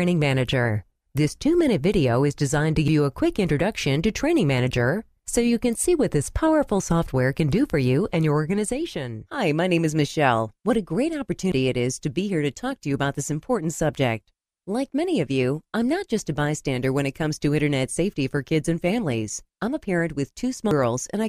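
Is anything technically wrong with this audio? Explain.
Yes. There are sudden jumps at 2.88, 11.52 and 20.71 s. At each the sound skips ahead, losing roughly a tenth of a second, and about a fifth at 20.71 s. The likely cause is a dropped buffer (overrun): samples were overwritten before being read, and the surrounding audio was spliced together.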